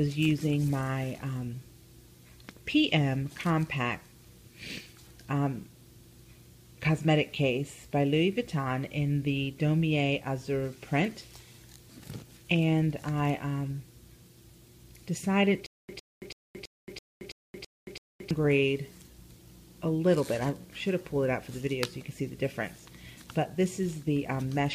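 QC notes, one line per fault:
15.66–18.31 s, stutter with silent gaps: a 106 ms burst repeats eight times every 330 ms with dead silence between, likely a stalled stream retrying.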